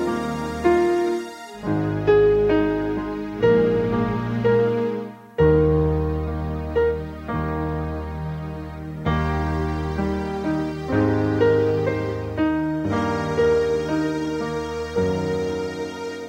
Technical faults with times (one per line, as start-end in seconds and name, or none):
none